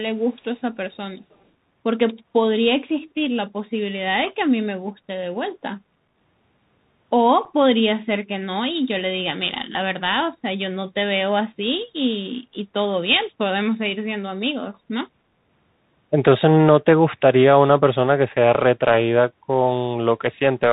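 Throughout, the speech carries the Bluetooth CVSD headset codec's narrowband sound: nothing passes above 4 kHz, s sounds turn scratchy, loud bright sounds distort as the one-bit step lags behind them, and a granular hiss sits beneath, unlike the smoother band-limiting of a plain telephone filter.

From 1.17 to 1.35 s a very faint delayed copy of the speech appears about 315 ms behind the original, most likely an echo leak where a far-end loudspeaker's echo canceller let some sound through. The long fixed delay separates it from room reverberation.

At 7.45 s a 7.5 ms hole cuts the speech with abrupt edges, unconcealed Bluetooth headset packet loss, consistent with a couple of lost voice packets replaced by nothing. Its brevity and hard edges distinguish it from a network dropout, which tends to be longer or smoothed over.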